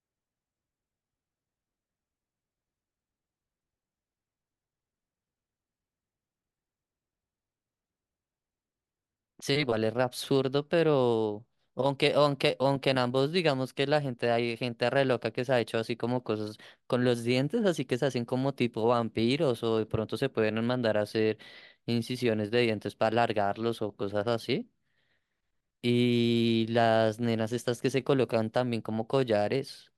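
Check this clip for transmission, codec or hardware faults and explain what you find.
Nothing here points to a transmission, codec or hardware problem; the speech comes through steadily with no gaps, glitches or distortion to flag.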